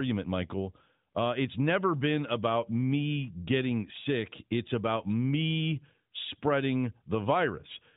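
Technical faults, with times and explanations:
No technical faults are audible in this speech recording.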